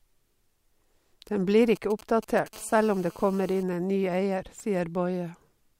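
From 1.76 to 2.48 s, GSM signalling bursts break in: galloping clusters of ticks and short 217 Hz buzzes, roughly 20 dB below the speech. A nearby 2G phone's radio pulses are being rectified by the audio circuit. From 2.53 to 3.63 s, steady GSM phone buzz follows, ending before "inn en ny". This hard, raspy 217 Hz buzz sits about 26 dB down, as the phone transmits in bursts 217 times a second during a call.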